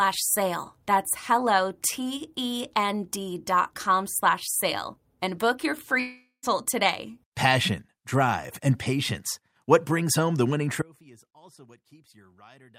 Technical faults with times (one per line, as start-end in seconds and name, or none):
5.99-6.45 long network dropout
10.82-12.78 audio dropout to a faint residue